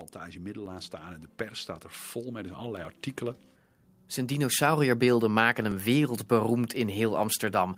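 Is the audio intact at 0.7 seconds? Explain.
No. A dropped buffer (overrun) at 0.66 s causes a small jump in the speech. The likely cause is that the program failed to collect a block of samples before the hardware overwrote it, so roughly 10 ms vanished and the two sides joined directly without any silence.

Automatic gain rising is also under way from 0.36 to 1.35 s, just before "pers staat er". Having judged the input too quiet, the gain control lifts its level gradually by about 5 dB, so the voice and the background swell together across that second.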